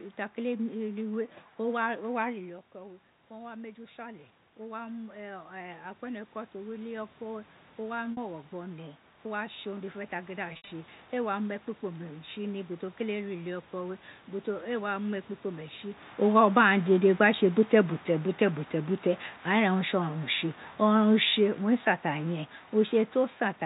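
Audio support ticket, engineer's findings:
Automatic gain rising, 2.29–12.1 s. Input level drops by about 13 dB as the talker moves back from the mic near 2.5 s. AGC responds slowly, adding about 12 dB over roughly ten seconds. Speech and room noise swell together.

Packet loss with pitch repetition, 8.12–8.17 s and 10.53–10.71 s. First gap is 50 ms: a brief held, buzzy tone. Second is 130 ms scattered over 180 ms, longest run 70 ms. Concealment repeats the last pitch period, fades to silence, then cross-fades back.

Automatic gain falling, 19.74–23.55 s. AGC judges the input too loud, or its background noise too strong, and pulls gain down by about 5 dB over nearly four seconds. Speech and room noise sink together.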